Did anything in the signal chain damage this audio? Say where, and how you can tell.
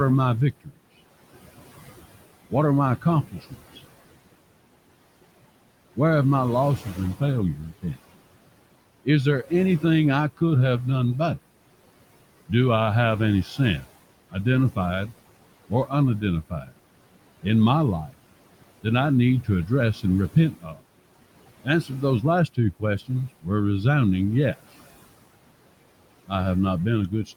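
Yes. The damage happens in call processing, where a noise suppressor works on the signal throughout. It pulls the steady room noise, which sits about 17 dB under the speech, down by about 18 dB in each frame. You hear the background sink in the pauses and come back up under the voice.

The same noise suppressor also cuts speech in six places. It takes quiet parts of the speech for noise and lowers them with the background. This happens at 0.52–0.79 s, just after "are my"; at 2.5–3.78 s; at 5.96–7.98 s; at 9.05–10.41 s, just before "have done better"; at 13.57–23.47 s, between "I have any" and "resounding yes"; and from 26.26 s to the end. Soft consonants and word endings drop by about 12 to 19 dB. Only fragments are hit, but over the long stretch they add up to about a second, and those sounds come out swallowed.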